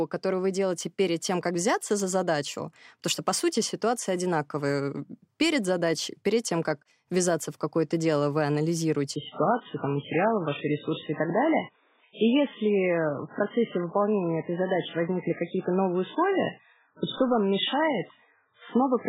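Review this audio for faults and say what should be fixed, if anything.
From 9.16 s to the end, an adaptive stream at a lower bitrate: treble vanishes above 3.8 kHz with no gap, which fits MP3 dropping from 128 to 8 kbit/s. Prevent it by adding bandwidth headroom or buffering, or by capping the lowest rendition.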